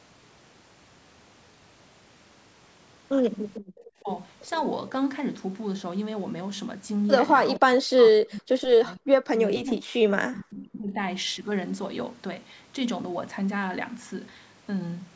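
A faint, delayed copy of the voice flickers in at 3.56 to 3.61 s, trailing the original by 462 ms and sitting roughly 30 dB below it. This is an echo leak, most likely from a far end playing the call on a loudspeaker whose echo canceller let a scrap of the returned signal slip through. Right after, from 3.61 to 3.75 s, the room tone drops out by about 40 dB for around 150 ms and then returns. That is background gated by the echo canceller, which clamped the microphone hard while it judged the loudspeaker active and released it once the threat passed. The speech itself is pulled down twice. At 4.03 to 4.09 s there is a brief dip of roughly 15 dB. From 7.59 to 10.99 s it sinks much further, by something like 40 dB, and stays held down for about three seconds. Both are speech suppressed in double talk. The likely cause is both sides talking at once, leaving the canceller unable to separate the near talker from the loudspeaker echo, so it attenuated everything. 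The band stops at 8 kHz, consistent with the ordinary microphone processing of a call.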